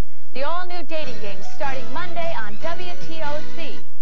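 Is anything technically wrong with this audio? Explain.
No, nothing technically wrong can be heard in this audio. There are no audible technical faults anywhere in it.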